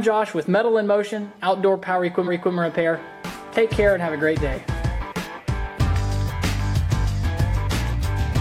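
At 2.23 s a short run of compressed frames was delivered twice, so the decoder played the same stretch of audio a second time. These are repeated frames: the block from 2.23 to 2.51 s, about 279 ms long and consistent with roughly six frames, plays once more immediately after itself. The result is a stutter, a brief chunk of sound heard twice in a row. Everything that follows arrives about 0.28 s later than it should.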